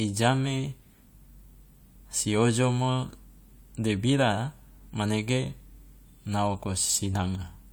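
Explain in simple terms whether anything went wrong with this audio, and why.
Nothing went wrong here.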